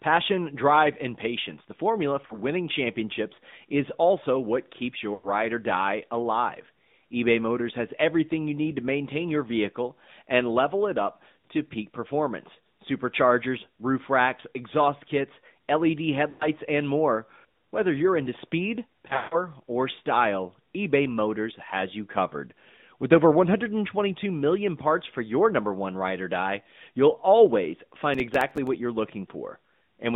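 Speech heard through an AMR narrowband mobile codec at 10.2 kbps, with the line confined to roughly 150 Hz to 3.7 kHz. The low-bitrate vocal-tract model gives the voice a plainly audible buzzy, synthetic edge, and nothing above 4 kHz survives. Lost AMR speech frames break the signal where the decoder repeats its last pitch and filter settings at falling gain. There is a 40 ms dip at 2.26–2.38 s, and 100 ms stretches at 5.14–5.29 s and 16.30–16.48 s that smear and fade. Losses are scattered across 19.08–19.36 s, with the longest run near 140 ms, and a single short warble falls at 22.28–22.30 s. Processor overload crackle appears at 28.14–28.68 s. There, a string of missed deadlines, around fifteen short gaps of silence that point to a buffer of about 3 ms, produces a gritty tearing.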